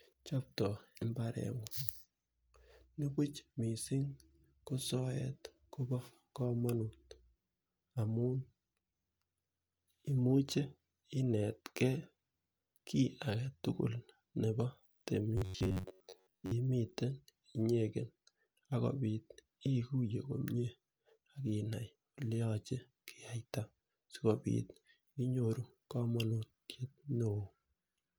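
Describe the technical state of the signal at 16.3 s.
At 16.3 s the audio is inside a stretch of robotic sound from repeated short buffers, running from 15.37 to 16.51 s. New audio likely arrived too seldom, so a slice of about 10.7 ms was replayed over most of the span, imposing a rigid, metallic buzz near 94 Hz on the speech.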